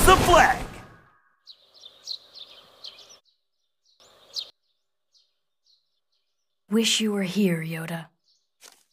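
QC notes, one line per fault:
2.5–4.5 s, chunks out of order: one 500 ms block of audio was delivered three blocks late, so it plays after the three that should follow it. Nothing is missing, but the passage comes out jumbled, with three hard joins.
5.5–6.5 s, chunks out of order: a 500 ms block arrived one block late and swapped places with its neighbour. The sound briefly runs backwards in sequence, and the misplaced edges leave hard joins at each splice.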